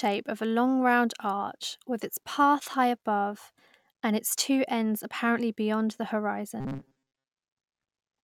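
From 6.60 to 7.33 s the speech turns into a rigid, metallic buzz pitched at 134 Hz, tracking the words only loosely: robotic sound from repeated short buffers. The likely cause is audio arriving too seldom, so roughly 7.5 ms chunks were replayed through most of that stretch.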